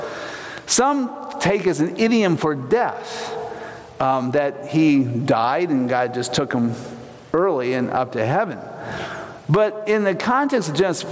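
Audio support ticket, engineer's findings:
Gain pumping, whole clip. Gain swing around 20 dB. Dynamics flattened, loud and soft parts squashed toward one level. Likely cause: input gain set far too hot for the mic, with a fast limiter or compressor clamping each peak and releasing in pauses. Call-side mic processing audible as expected high-pass and top end stopping at 8 kHz.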